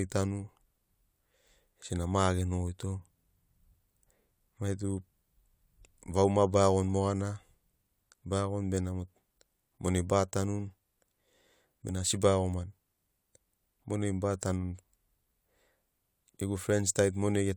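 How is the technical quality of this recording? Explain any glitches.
Nothing technical jumps out in this speech recording, and there are no glitches to explain.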